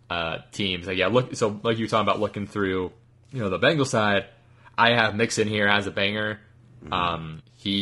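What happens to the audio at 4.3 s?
At 4.3 s the speech passes through what is likely low-delay AAC compression of the AAC-ELD kind used for video calls, and it affects the whole clip, not just this moment. It codes about 500 frequency lines a frame with a low-delay window, and the coding budget, which fits about 32 kbps, is stretched thin. The result is plainly audible: the voice sounds rough and grainy, with noise filling the gaps between harmonics and a dulled or synthetic-sounding top band.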